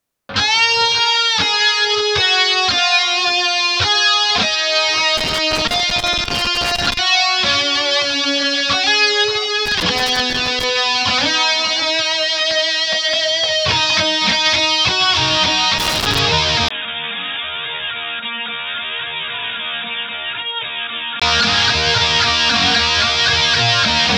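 Loose connector crackle shows up at 5.17 to 6.97 s, 9.66 to 10.64 s and 15.78 to 16.19 s, a worn contact chopping the signal into scratchy, irregular bursts. Then at 16.69 s, after a 20 ms gap, the input switched to a poorer device, likely a headset or lesser mic. Everything above 3.8 kHz vanishes, the level drops about 10 dB and a new noise floor sits roughly 45 dB down, until 21.22 s.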